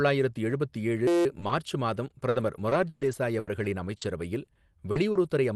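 Right after "எழுபத்து ஏழு", from 1.07 to 1.25 s, a system hang loop turns the sound into a steady buzz. The output froze while the hardware kept replaying one 5.8 ms slice about 31 times, so the buzz sits at 172 Hz, which fits a 256-sample ring buffer. Unlike packet loss, the repetition is exact and perfectly periodic, with no holes or smearing, just a pitched drone where the audio should move on.

From 1.39 to 4.03 s, repeated packet loss (robotic sound) makes the audio choppy. Seven gaps, the longest 120 ms, were patched by stretching the preceding sound, covering about 14% of the stretch. A shorter bout from 4.45 to 5.27 s has four gaps of up to 40 ms, concealing about 15%. This sounds like broken fragments with pieces missing rather than a steady tone. The call path cuts off above 12 kHz throughout.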